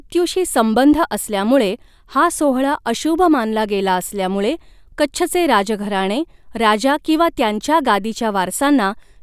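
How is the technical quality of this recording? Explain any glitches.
Nothing here counts as a glitch; the speech runs along with no technical faults to point out.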